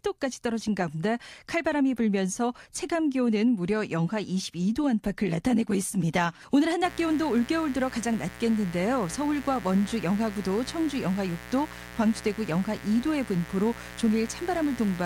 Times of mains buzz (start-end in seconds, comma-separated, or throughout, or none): 6.84-15.06